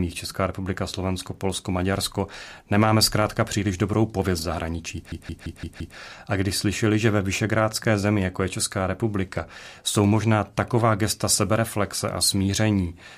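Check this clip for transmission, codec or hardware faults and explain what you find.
There's one fault. Right after "příliš dobrou pověst zahraničí", from 5.12 to 5.97 s, a system hang loop replays one 171 ms chunk five times at 5.86 Hz, a machine-gun stutter.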